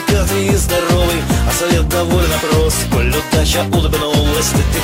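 No technical faults can be heard anywhere in this audio. Nothing in the recording calls for a fix.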